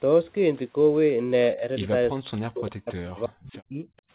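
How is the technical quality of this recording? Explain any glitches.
The recording has one clear glitch, heard through a narrowband call path with nothing above 4 kHz. From 2.16 to 3.85 s, the echo canceller likely mistook double talk for echo, causing speech suppressed in double talk: the voice drops by roughly 40 dB and breaks up for about a second and a half.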